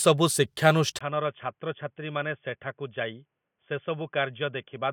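At 0.99 s, likely an input switched to a poorer device: after a 20 ms gap, the speech turns boxy and quieter, with nothing above 3.4 kHz.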